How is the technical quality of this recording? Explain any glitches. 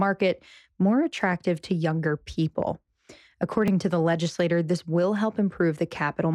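One glitch stands out. At 3.68 s, just before "to the legislator this", there is a block of digital silence about 2.7 ms long. The output buffer went unfilled, fitting a 128-sample block. The abrupt cut produces a sharp tick.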